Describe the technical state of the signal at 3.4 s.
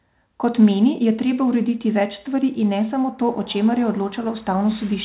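At 3.4 s the speech is intact, with nothing there beyond the narrow telephone-style band of the call path, whose content stops at about 4 kHz, as a G.711 narrowband call would.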